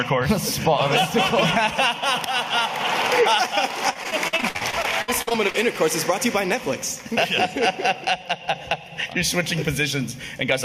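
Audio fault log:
Throughout, gain pumping: quiet passages and background swell up, then duck by around 15 dB under each loud sound, likely from excessive gain driving a fast limiter or compressor.
3.93–5.56 s, repeated packet loss (robotic sound): choppy, robotic audio with pieces missing; repeated dropouts up to 61 ms were patched by extending earlier sound, concealing about 27% of this stretch.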